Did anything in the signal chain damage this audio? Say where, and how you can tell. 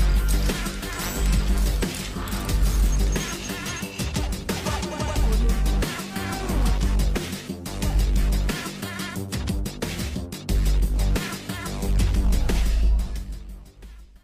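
No, nothing in the chain seems to have left a mark here, so there's no stage to point to and nothing to hear that needs explaining.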